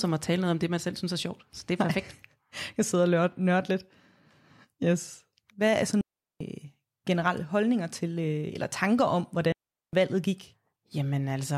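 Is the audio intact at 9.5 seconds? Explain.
No. Just after "eller tanker om", at 9.52 s, the speech cuts out in a digital wireless dropout lasting about 0.41 s, to 9.93 s. The receiver lost too much of the incoming data stream to decode, so rather than play corrupted audio it muted the output with a very quick fade. The result is a clean hole of near silence in the middle of the speech, with no click, hiss or noise burst at either edge.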